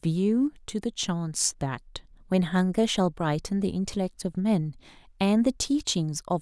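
No technical faults are audible anywhere here.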